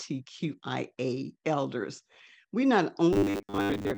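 Speech, and after "elders we not" the last stretch from 3.13 s to 3.97 s collapses into robotic sound from repeated short buffers: a rigid, metallic buzz pinned at 100 Hz that only loosely tracks the words. That pitch points to one 10 ms chunk being replayed over and over, likely because fresh audio arrived too seldom and most of the real signal in that stretch was skipped. Unlike a plain dropout or codec warble, the buzz holds one fixed pitch regardless of intonation.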